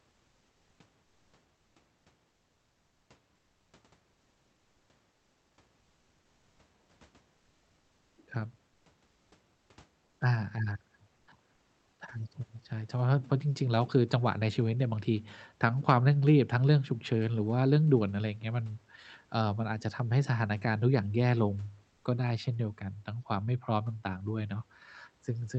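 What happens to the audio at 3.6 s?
From 3.35 to 3.73 s the real background drops out for about 380 ms and a flat, featureless hiss takes its place, roughly 3 dB quieter. This is comfort noise in place of the background, likely from Opus DTX pausing transmission while the receiver synthesises filler noise.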